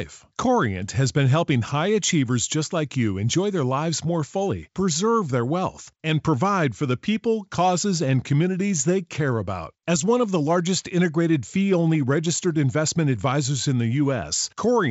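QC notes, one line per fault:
No faults heard.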